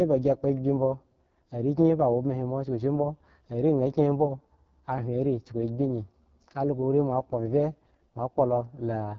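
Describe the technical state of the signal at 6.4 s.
At 6.4 s the speech is carrying AMR wideband (HD Voice) codec damage, as it does across the whole clip. The codec models the voice up to 6.4 kHz with a pulse-excited vocal tract filter and pads the band above with shaped noise, leaving nothing beyond 7.5 kHz. The coding is heavy here, giving a rough, raspy texture that points to AMR-WB's lowest mode, around 6.6 kbit/s.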